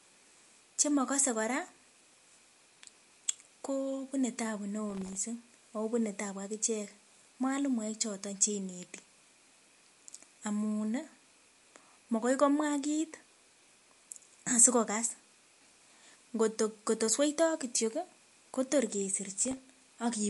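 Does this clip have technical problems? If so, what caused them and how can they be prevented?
Yes. The speech sounds watery and swirly, with smeared consonant attacks and nothing above 11.3 kHz. On a spectrogram this shows as a hard ceiling with weak detail flickering beneath it. The likely cause is MP3 compression at a low bitrate, around 48 kbps. Encoding at a higher bitrate prevents it.

From 4.90 to 5.17 s, just before "akobune tabu akichek mwalimuek", and from 19.32 to 19.62 s, processor overload crackle tears through the sound. Buffers of under a millisecond miss deadlines repeatedly and drop to silence, leaving dense hard-edged notches in the waveform and vertical streaks on a spectrogram. Larger buffers or a lighter processing load prevent it.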